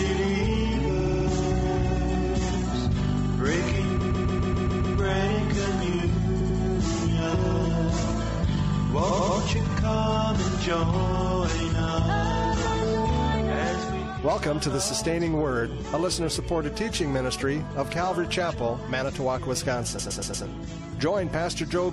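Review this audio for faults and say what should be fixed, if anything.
Repeated frames occur at 0.99 to 1.27 s, 4.01 to 4.98 s, 6.40 to 6.58 s, 9.09 to 9.37 s and 19.98 to 20.45 s. Each time, a short block of compressed audio, 70 to 139 ms long, was passed to the decoder again and plays two to seven extra times. This gives a stutter. The longest event, at 4.01 s, adds 0.98 s. To prevent this, check frame sequence numbers and discard duplicates before decoding.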